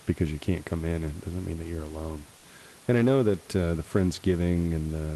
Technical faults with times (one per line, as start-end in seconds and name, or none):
none